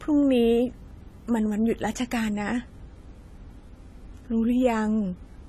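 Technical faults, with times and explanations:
Throughout: low-bitrate audio saved at a high bitrate. The speech has no content above 14.1 kHz, a hard ceiling that a 192 kbit/s MP3 would not normally impose. That cut-off and the leftover artefacts of the first encoding point to an earlier encode at a low bitrate, likely around 32 kbit/s AAC. The second, generous encode could not restore the discarded detail. It simply preserved the damage in a larger file.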